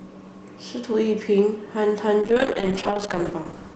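From 2.22 s to the end at 3.75 s, a call bitrate drop makes the speech rough, watery and duller. The encoder is coding more coarsely, which fits a fall from 32 to 9 kbps. Unlike packet loss, the degradation is continuous, with no gaps or glitches.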